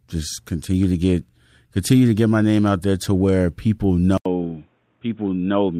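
Speech that, right after "there to where people", goes silent for 80 ms at 4.18 s and returns duller, boxier and somewhat quieter, with a faint new background noise through to 5.79 s. The input likely switched to a poorer device.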